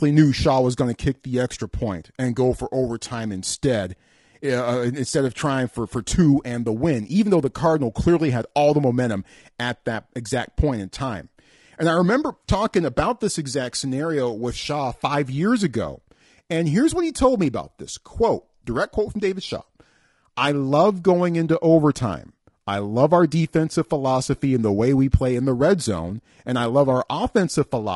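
Low-delay AAC compression runs through the whole speech clip, leaving the voice rough and grainy, with noise filling the gaps between harmonics and a thin, synthetic-sounding top band. The likely cause is AAC-ELD, whose short frames resolve pitch poorly at a rate fitting roughly 32 kbps.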